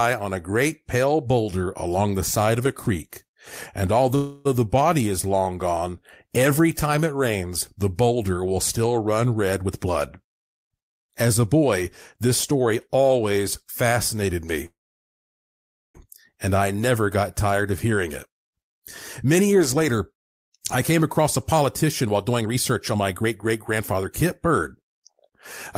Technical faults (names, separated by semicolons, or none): call audio freeze; jitter buffer speed-up